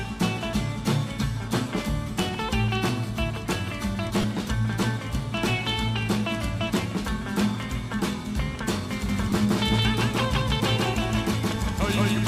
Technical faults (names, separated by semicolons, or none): lost LE Audio frames; doubled audio track